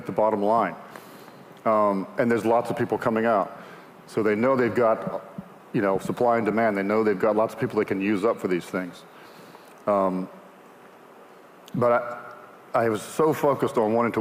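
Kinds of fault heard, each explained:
Nothing stood out on listening; no technical fault could be heard anywhere in the audio.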